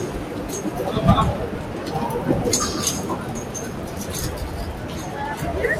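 Throughout, a noise suppressor applied to these sounds treats sustained tones and ambience as noise, pulling held portions and tails down by around 5 dB while onsets pass. It pumps and thins; a spectrogram shows sustains dimming and fading early, the waveform a flickering envelope.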